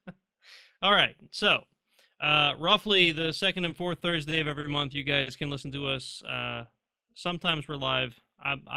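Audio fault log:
throughout, overlap-add ripple: the speech carries a metallic buzz with extra tones around each sound. The level swells and sinks by about 6 dB at a rate of roughly 200 times a second, once per processing frame. The audio was split into windowed frames and rejoined with an overlap whose windows do not add up to a steady gain, so each frame boundary leaves a dip or bump that repeats all the way through.
3.69–4.66 s, repeated stalls (stutter): after "uh roughly the second" and before "month you", the speech drags and catches four times within under a second, each catch no longer than 40 ms, about 90 ms held in all, roughly a tenth of the span. Nothing is lost. Packets were arriving late or more slowly than they were played, so the jitter buffer kept running dry, and each time the receiver extended the last sound until more audio arrived.
5.22–5.29 s, short stall from a late packet: between "month you" and "can listen to", one sound hangs on for about 50 ms with a slight buzz or dip before the speech continues exactly where it left off, with nothing skipped. 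A packet turned up roughly 50 ms later than its slot, the jitter buffer ran empty, and the receiver stretched the previous sound to bridge the wait, then resumed once the packet arrived.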